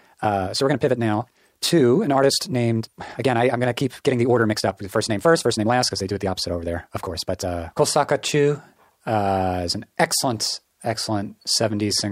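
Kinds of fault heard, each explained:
Time-stretched section: The opening of the speech was likely squeezed by time-stretching software to fit a shorter duration, with pitch held steady by discarding short slices of the waveform instead of resampling. From the start to 7.84 s the speech runs about 1.64 times faster than natural pace. It sounds rushed, yet the pitch stays where it belongs. At 7.84 s the pace abruptly drops back.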